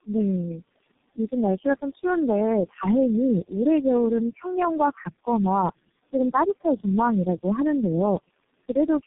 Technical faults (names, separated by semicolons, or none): noise suppressor artifacts; tandem speech coding; speech cut by the noise suppressor